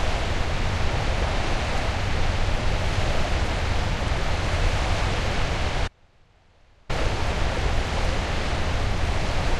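From 5.88 to 6.89 s, an audio dropout to a faint residue: sound cuts abruptly to a faint leak far below normal level, likely a broken feed into a still-live path.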